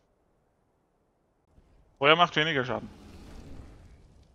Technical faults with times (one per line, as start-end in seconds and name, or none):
1.45-1.47 CD skip